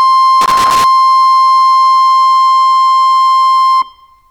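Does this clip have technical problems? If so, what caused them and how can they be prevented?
Yes. From 0.41 to 0.84 s the music is broken up by loose connector crackle. It is an irregular burst of scratchy noise lasting under half a second. A worn or dirty contact in the signal path was losing and regaining connection as it shifted. That chopped the audio into fragments. Any DC on the line turned each break into a pop. Cleaning contacts and replacing worn cables or jacks prevents it.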